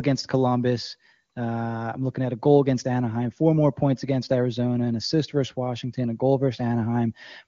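No technical faults can be heard in this speech. It carries the narrowed top end of the AMR wideband (HD Voice) codec, and the lack of roughness points to one of its highest rates, around 23.85 kbit/s.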